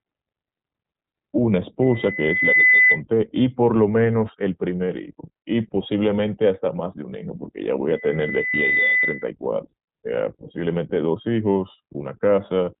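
Throughout, the speech sounds thin, slightly rough and synthetic, with nothing above about 3.8 kHz. That is the iLBC codec, which codes each short frame independently within narrowband limits.

From 1.82 to 3.02 s, a 2 kHz tone swells over under a second to roughly 10 dB above the speech. This is loudspeaker feedback squeal: the microphone re-amplifies its own loudspeaker until the loop runs away at one frequency.

From 7.88 to 9.30 s, the same 2 kHz squeal returns. It builds more slowly, over about a second, and peaks around 5 dB above the speech.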